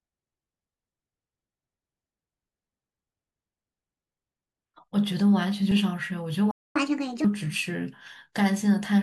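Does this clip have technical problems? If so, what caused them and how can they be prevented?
Yes. A playback stall silences the speech from 6.51 to 6.76 s, about 240 ms, likely because the player ran out of buffered data or its thread was blocked. The waveform shows a flat gap, and the spectrogram shows a blank vertical band. A larger playback buffer and keeping the audio thread free of blocking work would prevent it.

Catch-up at higher speed follows from 6.76 to 7.24 s. The backlog is resampled at 1.5 times normal speed, so the speech runs fast and its pitch rises by about seven semitones before dropping back. On a spectrogram the harmonics jump upward and the syllables look squeezed in time. Catching up with pitch-preserving time-stretching, or by gently dropping the backlog, would avoid the shift.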